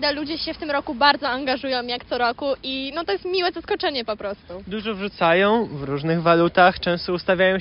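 Nothing goes wrong anywhere in this one, so there's no fault to point to at any moment of it.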